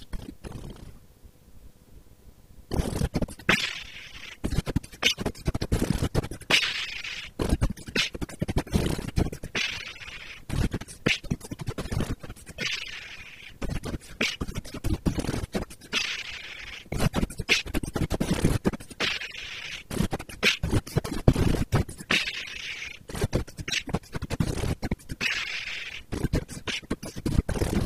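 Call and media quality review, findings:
No faults found on review; nothing to action.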